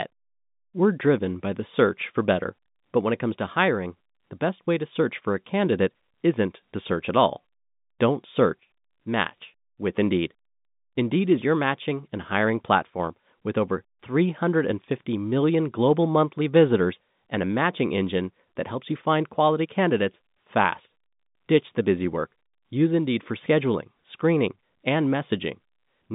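Nothing stood out on listening to this speech recording.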